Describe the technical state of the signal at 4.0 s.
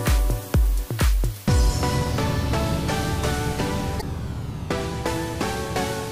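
At 4.0 s there is damaged data in the compressed stream, from 3.99 to 4.03 s. The decoder misreads the corrupted frames and loses sync until it finds the next valid header, producing a brief chirp, squawk, click or short hole.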